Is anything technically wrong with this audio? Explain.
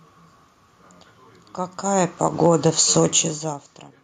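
Yes. From 1.82 to 2.65 s there is automatic gain falling: the gain control judged the input too loud, or its background noise too strong, and pulled its gain down by about 9 dB. The speech and the room noise sink together, which shows on the waveform as a smooth shrinking envelope and on the spectrogram as uniform fading across all frequencies.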